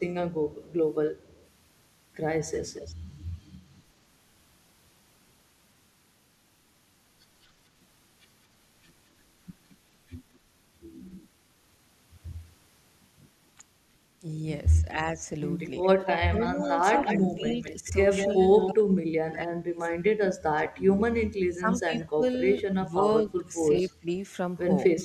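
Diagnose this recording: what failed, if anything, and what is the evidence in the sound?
Echo leak, likely from the far end's call-processing canceller: delayed copies about 0.2 to 0.24 s behind the speech at 0.58–1.47, 2.57–2.95, 9.7–11.28 and 15.82–18.74 s, from faint to nearly full level. On a spectrogram, they appear as smeared duplicate harmonics.

Speech suppressed in double talk, likely also call processing: from 14.82 to 24.98 s, the speech dips in pieces totalling about 4 s, down as much as roughly 35 dB. The waveform shows chopped envelope gaps.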